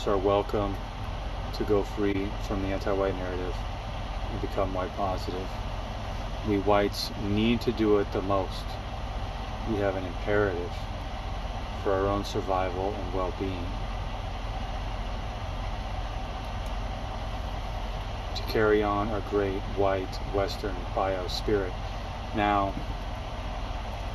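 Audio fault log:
2.12–2.16 s, corrupt frame decoded: there's a quick glitch here, roughly 34 ms long, the span of a single damaged frame. Some bits in that compressed frame got flipped, and the decoder played it anyway instead of concealing it, so misread gains or codes put energy at frequencies where it doesn't belong. That stray energy peaks around -20 dBFS and comes through as a short chirp, squeak, blip or burst of noise.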